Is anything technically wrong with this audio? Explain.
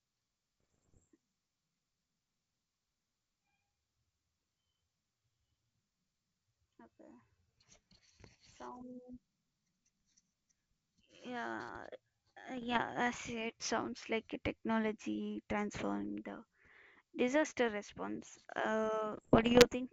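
Yes. Bit errors on an ADPCM link are audible in the speech at 0.60–1.08, 8.72–8.83, 12.55–12.79, 16.25–16.30 and 19.13–19.68 s. Flipped bits, at well under one percent, knock the decoder's step size and predictor off track. This produces pops, rough bursts and brief level jumps.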